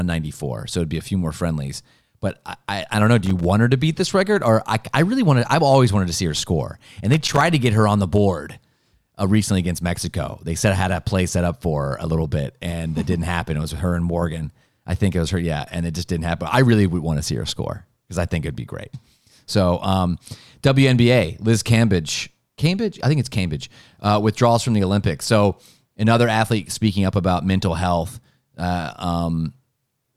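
At 3.26 s the speech is broken by a short burst of loose connector crackle lasting until about 3.45 s, and a second burst follows from 7.12 to 7.41 s. Both come from a worn or dirty contact making and breaking as it shifts. That chops the signal on and off in rapid succession, and any DC present on the line turns each break into a pop. The result is an irregular, scratchy crackle.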